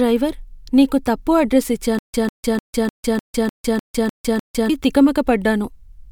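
A speech clip with a stutter with silent gaps. It starts at 1.99 s, right after "నీకు తప్పు అడ్రస్", and runs to 4.70 s. A burst of about 148 ms repeats nine times. Each repeat is followed by about 153 ms of dead digital silence, so the pattern cycles every 301 ms at a steady pace. The likely cause is a stalled player or stream that replayed its last fragment at each retry and then ran dry. The speech due in that stretch is lost.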